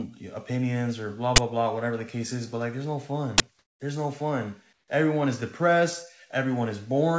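At 1.36–1.38 s and again at 3.38–3.40 s, an uninitialised buffer plays: a 20 ms block went out before audio was written to it, so stale memory was read as samples. Each is a harsh, loud digital burst. On the waveform it is a rectangular slab, and on the spectrogram a broadband vertical stripe.

From 3.59 to 3.80 s and from 4.73 to 4.88 s, the real background drops out and is replaced by a smooth, featureless hiss about 6 to 7 dB quieter. This is comfort noise in place of the background, likely from discontinuous transmission, where the receiver synthesises noise while the sender pauses. The spectrogram shows uniform, textureless noise capped near 8 kHz like the rest of the band-limited call audio, with a visible level step at each edge.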